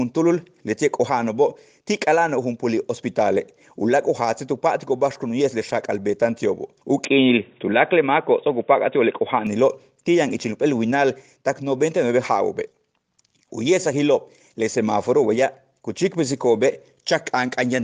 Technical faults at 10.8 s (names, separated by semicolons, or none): none